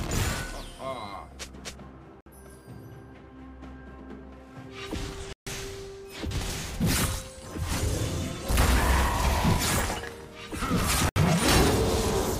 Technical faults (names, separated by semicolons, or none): Bluetooth stall